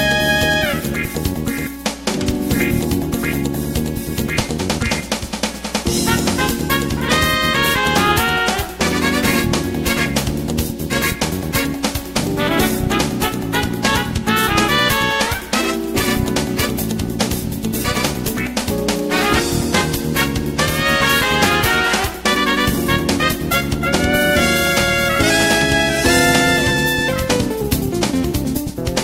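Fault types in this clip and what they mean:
Mains hum: a ground loop or nearby transformer is letting the 60 Hz power line leak into the signal path, so a steady low drone at 60 Hz, with some low harmonics above it, sits under the audio for the whole clip, roughly 20 dB below the programme level.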